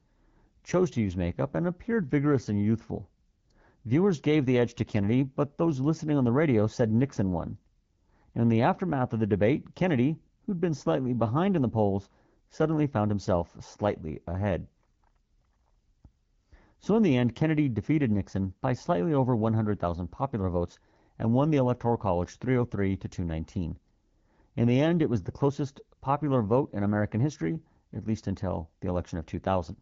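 No technical faults present.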